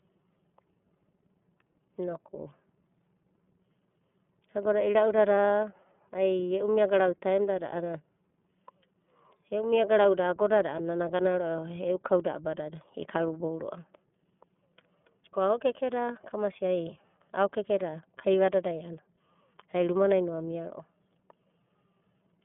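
From start to finish the speech has passed through the iLBC codec, a narrowband VoIP coder that rebuilds each frame's excitation independently of the previous one, at a setting consistent with 30 ms frames and roughly 13 kbps. The line band runs from about 150 Hz to 3.4 kHz, with nothing above 3.6 kHz, so the speech sounds muffled and thin. The coding damage is plainly audible as a rough, synthetic texture.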